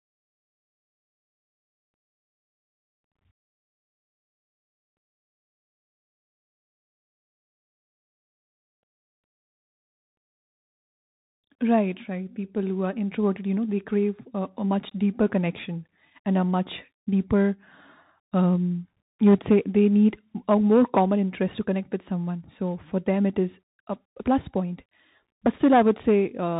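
Bluetooth CVSD headset codec damage runs through the whole clip: the speech is coded one bit at a time, each step nudging the waveform up or down, consistent with a 64 kbps link. Nothing above 3.8 kHz survives, s sounds turn scratchy, loud bright moments smear into distortion, and a grainy hiss sits underneath.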